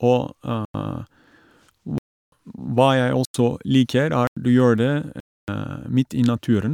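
The output buffer repeatedly went unfilled in time, so blocks of samples were replaced with zeros, producing a block of digital silence five times in this speech clip: 0.65–0.74 s, 1.98–2.32 s, 3.25–3.34 s, 4.27–4.37 s and 5.20–5.48 s. The three 93 ms gaps fit a 4096-sample buffer. The two longer gaps, 0.34 s and 0.28 s, are audible holes. Each drop and return is abrupt.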